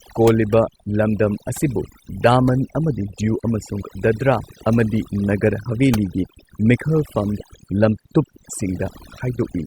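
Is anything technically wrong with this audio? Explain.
Yes. Overdone noise removal runs throughout this speech. Noise reduction set too strong cuts bands near the noise floor, leaving twinkling near-silence.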